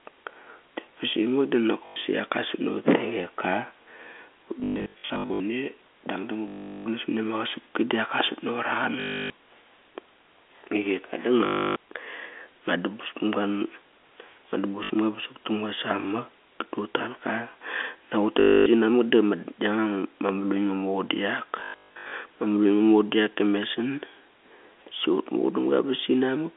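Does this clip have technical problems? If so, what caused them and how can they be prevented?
Yes. Packets went missing in transit and the receiver covered each gap by replaying the last packet it had, which is packet loss with last packet repeated. The gaps fit 20 ms packets. A replay seldom joins in step with the pitch, and longer runs buzz at about 50 Hz, a robotic stutter. This happens right after "basi mak" at 1.86–1.96 s, and again at 4.6–5.4 s (scattered, about 0.54 s lost), 6.48–6.86, 9.0–9.3, 11.46–11.76, 14.84–14.9, 18.4–18.66 and 21.6–22.12 s (scattered). The 250 Hz to 3.5 kHz telephone band of the G.711 coding stays audible throughout. Prevention: use a more reliable network path with QoS priority for the audio, plus an adaptive jitter buffer and proper loss concealment that interpolates instead of repeating packets.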